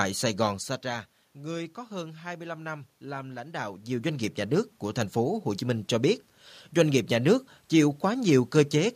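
No system faults are present; the background noise is the room itself, and the level shifts at about 0.5 s and 3.5 s are the talker moving relative to the microphone.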